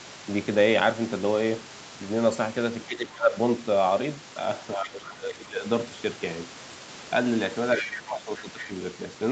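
From 2.88 to 3.36 s, 4.76 to 5.65 s and 7.77 to 8.73 s the speech sinks by about 15 dB at its deepest, over roughly half a second, a second and 0.7 seconds respectively. This is speech suppressed in double talk. The likely cause is the echo canceller treating the near talker as loudspeaker echo while the far end was also speaking, and ducking both together.

Inside the last of those dips, from 7.78 to 7.97 s, a second voice briefly comes through, only about 5 dB below the talker. That is the other side's voice leaking through: the far end playing on the loudspeaker was most likely picked up by the microphone and not fully cancelled. The leak is a short scrap of under a fifth of a second, arriving just as the suppression begins.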